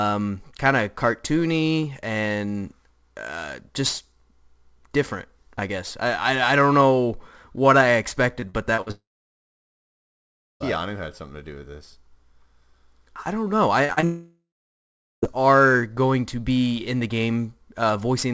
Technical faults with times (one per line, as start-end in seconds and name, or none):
8.40-8.91 repeated packet loss (robotic sound)
8.91-10.62 long network dropout
13.85-14.04 short concealed packet loss
14.04-15.24 long network dropout